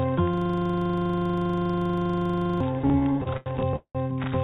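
At 0.34 s the audio locks into a system hang loop. The computer or driver stopped supplying new audio, and the hardware kept replaying the same ring buffer. That buffer holds 40 ms of sound. It repeats exactly 57 times, until 2.61 s. At 25 repeats per second, it comes across as a hard, steady buzz. Nothing new is heard for over two seconds.

From 2.74 s to 3.97 s come repeated stalls, heard as stutter. Audio arrived late or too slowly, and the jitter buffer ran dry 13 times. Each time the receiver stretched the last sound until fresh audio came. Those fills total 427 ms, about a third of the stretch. The longest lasts 188 ms. No audio is lost, but the sound drags and catches. Throughout, the G.711 A-law call path keeps everything below 4 kHz.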